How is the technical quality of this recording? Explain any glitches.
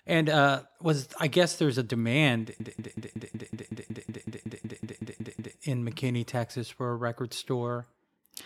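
The recording has one serious glitch, a system hang loop, from 2.60 s to 5.57 s. A short fragment of speech repeats 16 times in a rapid machine-gun stutter, about five bursts per second, before normal playback resumes with little or no audio skipped. The computer or audio driver stalled while the sound hardware kept replaying the same ring buffer. Each pass lasts about 186 ms, repeating at 5.38 Hz, which fits an 8192-sample buffer.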